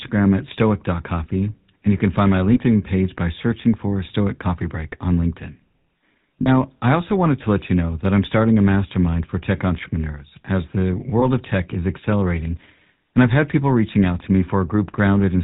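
Throughout the speech a buzzy, gravelly roughness sits on every syllable, with nothing above 4 kHz. This is the GSM full-rate codec at 13 kbps, rebuilding the voice from a vocal-tract model driven by sparse, regularly spaced pulses, and the damage is plainly audible.

Lost GSM frames cause brief metallic rings at 2.54 to 2.59 s between "you can find my" and "page by searching for", at 6.42 to 6.48 s just before "I also wanted to", and at 11.20 to 11.24 s between "tech entrepreneurs as the" and "of tech is accelerating". Each gap of about 20 to 40 ms, which fits one or two missing frames, was filled by repeating the last good frame's settings.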